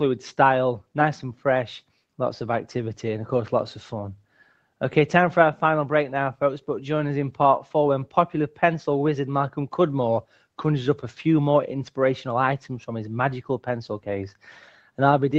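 The call's noise suppressor mistook parts of this audio for noise and turned them down. At 4.21–4.62 s, 10.23–10.44 s and 14.74–14.98 s, the sound drops by about 10, 11 and 9 dB for brief stretches, each a fraction of a second.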